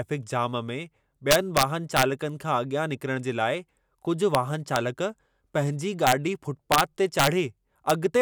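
Integer overflow breaks the speech seven times: a long stretch from 1.31 to 2.03 s, single cracks at 4.35 and 4.76 s, bursts at 6.07 to 6.12 s, 6.72 to 6.81 s and 7.19 to 7.27 s, and a crack at 7.90 s. Peaks that were pushed about 1 to 4 dB past full scale wrapped to the opposite sign instead of being limited, giving violent cracks harsher than clipping. On a waveform, peaks jump from one rail to the other. A spectrogram shows broadband vertical streaks.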